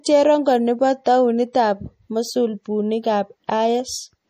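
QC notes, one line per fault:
Throughout, MP3 compression: the speech has a watery, swirling quality as weak frequency detail flickers on and off between frames, and nothing sounds above 15.2 kHz, which fits a starved bitrate near 40 kbps. That flicker, beyond the clean treble cut, likely points to MP3 rather than simple low-pass filtering.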